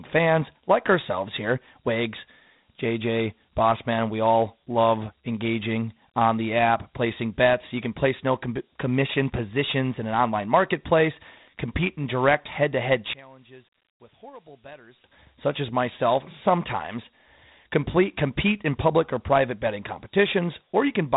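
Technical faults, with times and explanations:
Throughout: Dialogic VOX ADPCM. The speech has been squeezed through a 4-bit adaptive differential coder at 32 kbps, which fits 8,000 samples a second. Each sample stores only a coarse step from a prediction, and the step size trails the signal, so a gritty hiss follows the speech and roughens every syllable. The damage is plainly audible. Nothing survives above about 3.8 kHz, which gives the narrow, telephone-like band.
9.00 to 12.20 s: Wi-Fi interference. A wireless radio transmitting near the audio circuitry has been picked up and rectified into the signal. Its beacon repeats every 102.4 ms, so a steady ticking runs at roughly ten per second beneath the speech. The ticking sits far below the speech, around 40 dB down, so it is faint but regular, and it stops cleanly at 12.20 s.
13.13 to 15.04 s: one channel inverted. The speech suddenly drops by about 24 dB, leaving only a faint copy. 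This is likely one stereo channel with reversed polarity that was then folded down to mono. The material shared by both channels, which includes centred speech and its low end, cancels almost completely. What remains is only the small difference between the channels, a weak ghost of the speech, until full level returns at 15.04 s.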